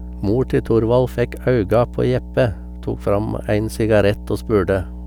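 Mains hum at 60 Hz runs under the speech from start to finish, a steady low drone fairly loud under the voice, likely from a ground loop or nearby transformer.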